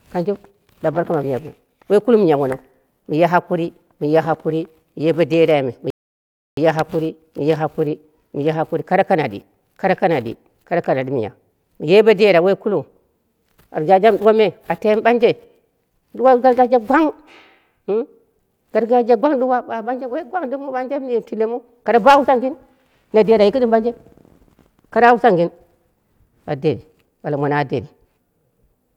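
At 5.90 s the speech stops dead for 0.67 s, a rebuffering stall: playback ran out of downloaded audio, waited, then resumed exactly where it stopped.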